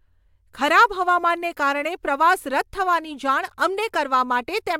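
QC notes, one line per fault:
Nothing stood out on listening to this speech clip.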